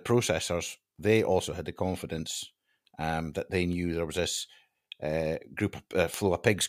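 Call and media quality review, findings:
Word clock ticks, speech, about seven sharp ticks of uneven strength roughly every 0.7 s, 0.52 to 6.14 s. Unlocked digital receiver clock, around 30 ppm drift, one sample slipped per tick.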